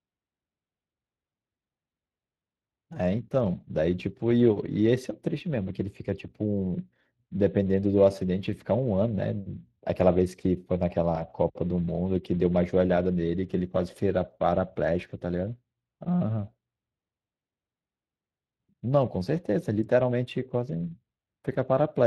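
Speex codec coding runs throughout: too few bits for the CELP excitation leave the speech plainly hoarse and noisy, consistent with a bitrate of about 22 kbps.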